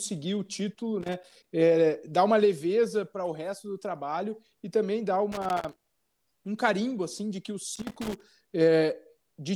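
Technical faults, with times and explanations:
1.01–1.44 s, 5.32–6.20 s and 7.76–8.24 s, loose connector crackle: irregular bursts of scratchy crackle after "o título", between "trabalho e também dá" and "um carimbo assim de", and after "assim de que o". A worn or dirty contact is making and breaking as it shifts, chopping the speech. The bursts are ragged and clustered, and they stop completely between episodes, unlike steady background crackle or evenly spaced digital clicks.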